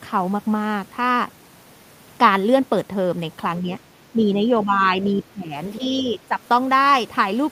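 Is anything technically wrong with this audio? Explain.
Yes, two related problems. Speech suppressed in double talk shows up at 3.6–3.7 s, 4.12–4.4 s, 4.65–5.53 s and 5.8–6.38 s. The talker dips by roughly 5 to 15 dB, deepest in the long middle stretch, and sounds pulled back in patches. That's likely the echo canceller ducking everything because it couldn't separate the talker from the loudspeaker echo while both sides spoke.

There's also the other side's voice leaking through between 5.04 and 5.23 s. A faint second voice, about 20 dB under the talker, slips in right inside that heaviest suppressed stretch, likely as the canceller failed to fully strip the far end from the mic.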